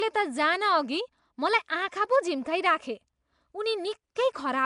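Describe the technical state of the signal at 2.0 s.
At 2.0 s the speech carries a rough, hissy halo and a smeared, underwater quality that persists throughout the clip, likely from Nellymoser compression. Each 256-sample block gets too few bits, so weak bands become noise. A spectrogram shows grainy noise-filled patches and nothing above 10.6 kHz.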